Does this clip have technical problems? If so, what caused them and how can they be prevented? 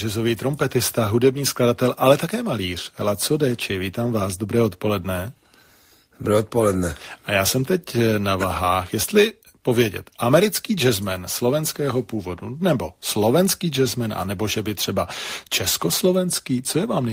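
No, nothing stood out as a technical problem on listening to this speech clip, so there is nothing here that calls for prevention.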